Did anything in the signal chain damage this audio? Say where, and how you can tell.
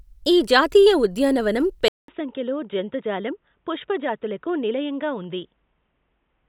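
Yes. Right after "ఈ జాతీయ ఉద్యానవనం", at 1.88 s, there's a gap of about 200 ms, and from there to the end the speech comes back duller and boxier, with nothing above 3.8 kHz, a new noise floor about 50 dB down, and a level roughly 5 dB lower. That points to the input stage, most likely the input switched to a poorer device, such as a narrower-band mic or a headset's call profile.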